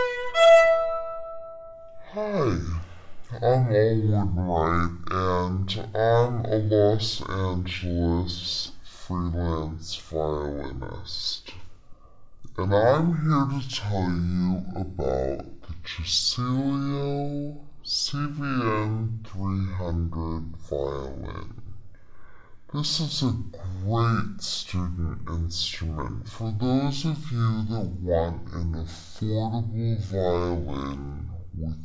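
From start to finish the audio runs at half speed and a full octave low, the signature of a wrong sample rate. Samples were played back without conversion at half their capture rate, which fits 32 kHz material played at 16 kHz, so everything sounds slowed and deepened together.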